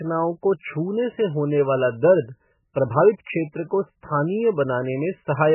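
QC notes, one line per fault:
Throughout, MP3 compression: the speech stops at 3 kHz and sounds watery and swirly. That points to a very low bitrate, likely around 8 kbps, forcing heavy cuts.
3.24 to 3.27 s, pre-echo: a short hiss leads an attack by 26 ms. Codec noise spread across the block fills the quiet before it.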